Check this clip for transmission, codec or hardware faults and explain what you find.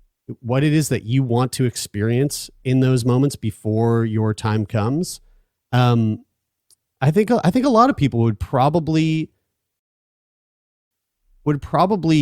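One transmission fault turns up in this speech clip: a rebuffering stall from 9.79 to 10.91 s. The player drained its store of downloaded audio and had to halt playback until fresh data arrived. Just after "of people would probably", the speech drops into silence for about 1.1 s, then picks up at exactly the point where it broke off. No speech is skipped or repeated; the gap simply adds time to the clip.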